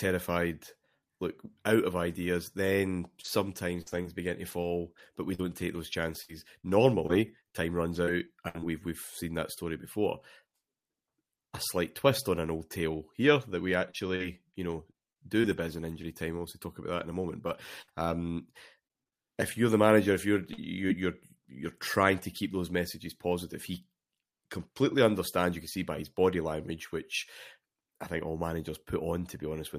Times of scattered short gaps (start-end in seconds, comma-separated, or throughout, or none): 3.21-8.64, 13.90-20.91